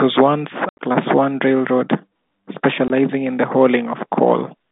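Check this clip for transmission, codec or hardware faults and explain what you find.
Packet loss filled with silence, the one fault, occurs twice. From 0.69 to 0.79 s, 90 ms of audio drops out, mostly in a single 80 ms gap; a 20 ms dropout follows at 2.88 s. The gap sizes point to 10 ms packets. The receiver played silence for each missing packet, so the speech stops dead. The G.711 telephone line underneath carries roughly 150 Hz to 3.7 kHz.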